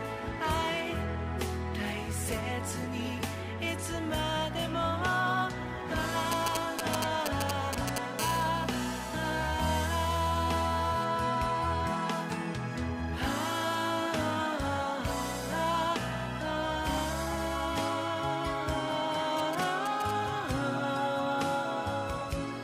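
A 2G phone close to the recording chain exchanged short signalling bursts with the network from 6.32 to 7.98 s, and the audio circuitry rectified those radio pulses. This is GSM signalling bursts: a galloping dit-dit-dit of ticks and brief 217 Hz buzzes, roughly as loud as the wanted sound. From 8.19 to 11.05 s the phone went into a call and transmitted continuously at its 217 Hz burst rate. The rectified pulses produce GSM phone buzz, a steady, hard, raspy 217 Hz tone with many harmonics. It sits about 14 dB below the signal and bears no relation to it. The phone returned to signalling from 19.39 to 20.11 s, and the same galloping ticks and short buzzes came back, now around 10 dB under the audio.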